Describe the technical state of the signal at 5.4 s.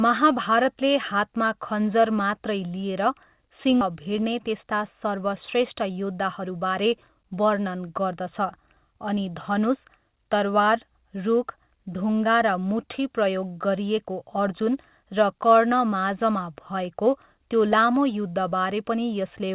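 At 5.4 s the speech is inside a jitter buffer speed-up running from 3.90 to 7.56 s. The receiver had buffered too much audio. It trimmed short pitch-period slices repeatedly, about a fifth of a second in total. The speech plays about 6% fast at unchanged pitch and sounds slightly hurried, still limited to 4 kHz by the call codec.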